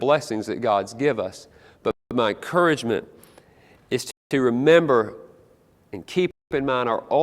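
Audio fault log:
1.91–2.11 s, 4.11–4.31 s, 6.31–6.51 s: gap between chunks. Speech stops for 200 ms after each 2 s stretch, because silence sits at every chunk join, likely from codec padding or a late-starting player.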